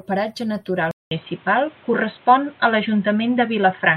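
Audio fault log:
0.91–3.97 s, input switched to a poorer device: likely a narrower-band microphone took over. After 200 ms of silence, the sound goes dull above 4 kHz, shifts level by about 5 dB, and picks up faint new background noise.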